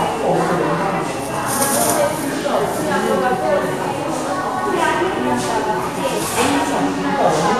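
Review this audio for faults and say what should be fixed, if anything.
Throughout the audio, the treble sounds hissy and grainy, tones are roughened and attacks blurred, with nothing above 14.2 kHz. This is likely Vorbis compression at a low bitrate, which fits roughly 35 kbps. Fine high-frequency detail has been quantised into noise of similar energy. On a spectrogram, content stops at a flat ceiling near 14.2 kHz, with blotchy, speckled texture below it instead of clean harmonics. To prevent this, keep the original file or encode at a higher quality setting.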